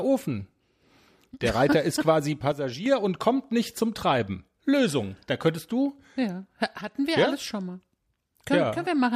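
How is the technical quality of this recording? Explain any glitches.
Two brief glitches mar the technical quality of this speech recording. From 2.52 to 2.86 s, and again from 6.81 to 6.95 s, the level abruptly sinks by about 6 dB and then snaps back, a sudden dip in loudness. The likely cause is one channel dropping out: with one side of the stereo signal lost, the mono sum keeps only half of the shared content, and anything carried solely in the missing channel vanishes.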